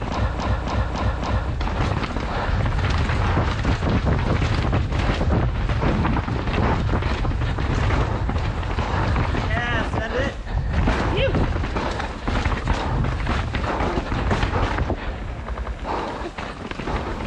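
Repeated frames from 0.35 to 1.47 s: a block of about 279 ms, which fits a run of six compressed frames, plays four extra times, so the audio stutters and gains about 1.1 s. Again at 15.54 to 15.72 s, a 93 ms block repeats twice more.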